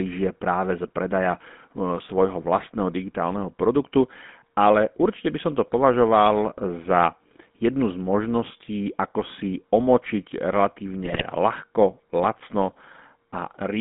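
A buzzy, gravelly roughness runs through the whole speech recording, confined to roughly 150 Hz to 3.6 kHz, the plainly audible signature of the GSM full-rate codec's pulse-driven vocal-tract model. From 11.03 to 11.24 s the voice breaks into squawks and gargling pops, the sound of GSM bit errors corrupting the decoder's filter, pitch and gain values over several consecutive frames.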